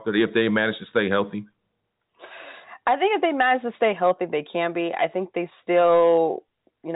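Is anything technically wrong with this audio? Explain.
No, nothing technically wrong can be heard here.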